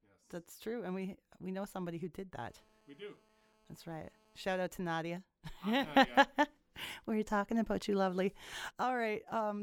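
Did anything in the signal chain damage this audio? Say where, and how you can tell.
Yes. GSM phone buzz enters at the analogue wiring from 2.40 to 4.45 s, starting just after "know somebody who did" and stopping before "out to". It is a hard, raspy buzz at about 217 Hz, rich in harmonics and unrelated to the speech, sitting about 32 dB below the signal. It holds steady throughout, which fits a phone on an active call. The handset's radio bursts were rectified by the analogue audio circuit and came through as this buzz.

There is also a sudden gain jump. At 5.84 s the speech and the background noise rise together by about 9 dB, with no fade between the two levels. They stay at the higher level until 8.72 s. Because the noise floor moves in step with the speech, the change was applied to the whole signal, not to the talker. The likely cause is a digital gain setting in the driver or call-processing stage, applied without a ramp.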